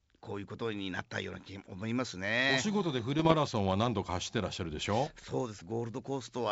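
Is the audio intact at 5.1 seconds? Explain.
No. From 5.06 to 5.25 s, bit errors on an ADPCM link, at a rate under one percent, knock the G.722 decoder's step size and predictor off track, so each flip rings on as pops and rough bursts with brief level jumps, seen as spikes and vertical broadband streaks.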